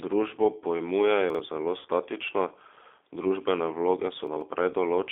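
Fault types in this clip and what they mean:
G.729 codec: The whole clip passes through a low-bitrate 8 kbit/s voice codec that rebuilds speech from a vocal tract filter and a pitch predictor with a few pulses per 10 ms frame, and the damage is plainly audible as a rough, slightly synthetic quality. On a spectrogram the energy sits between about 300 Hz and 3.6 kHz with nothing above, and harmonics look smeared and blocky frame to frame.
chunks out of order: Twice a short block of audio plays after material that should have followed it, once from 1.30 to 1.39 s, one chunk late, and again from 4.27 to 4.41 s, two chunks late. The blocks are about 46 ms long, which fits a 2048-sample buffer at 44.1 kHz. Nothing is missing, but each spot sounds like a jumbled stutter. The waveform shows hard discontinuities at the joins, and the spectrogram shows vertical lines there with abruptly shifted formants.
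VoIP packet loss concealed by the speech codec: From 1.79 to 1.88 s, about 60 ms of audio was lost and the decoder filled the gap by extrapolating its last pitch and filter while turning the gain down. The speech turns into a brief stretched, fading sound, and it stays weak for a moment after real audio returns. On a spectrogram, the stretched sound fades out, and the waveform envelope decays smoothly before normal signal resumes.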